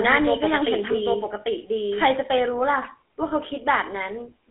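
A speech recording carried over a GSM full-rate codec at 13 kbps, with the line band limited to roughly 250 Hz to 3.5 kHz, so the voice sounds plainly buzzy and gravelly and thin at both ends. From the start until 2.08 s, a doubled audio track, likely from a second, slower capture path, lays an equally loud, dry copy about 0.7 s behind, producing a clean echo that cuts off abruptly. Lost GSM frames at 0.92 to 0.95 s and 3.28 to 3.31 s were each patched by repeating the previous frame's settings, leaving a brief rough, metallic ring.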